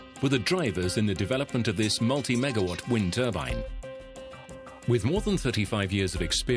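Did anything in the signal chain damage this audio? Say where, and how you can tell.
No, nothing in the signal chain stood out as having damaged this audio on listening.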